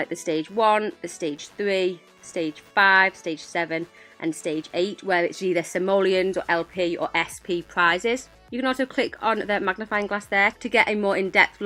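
From 0.48 s to the end, computer activity noise rides under the sound: a faint buzzing chirp pulsing around 100 times a second, some 40 dB below the signal. Processor or graphics load is shifting the shared ground. A spectrogram shows evenly spaced vertical striations.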